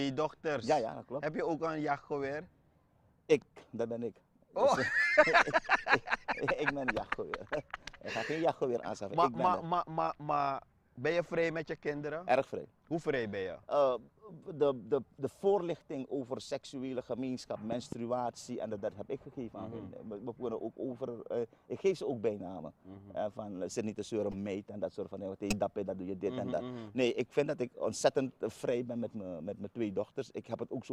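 A voltage step, likely from a plug, switch or static discharge, hits the signal at 17.72–17.95 s, giving two sharp loud pops roughly 10 dB above the sound, which continues beneath. Damaged compressed frames are then decoded as if intact: a corrupt frame decoded at 22.58 s, then at 24.32–24.35 s and 25.50–25.56 s, misplaces energy across frequencies, producing brief chirps, blips or bursts of noise whose error peaks rise from about -40 to -30 to -20 dBFS.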